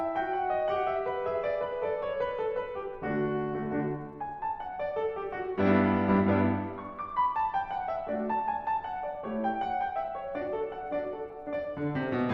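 Listening through this music, nothing stood out as a technical problem at any point.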